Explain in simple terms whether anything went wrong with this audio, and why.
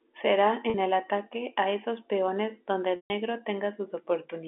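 Packet loss with pitch repetition, at 0.70 s and 2.96 s: pieces of the speech were lost in transit, and the receiver covered each gap by repeating the last pitch cycle. The 40 ms gap sounds like a brief buzzy hold. The 140 ms one fades to silence before speech cross-fades back.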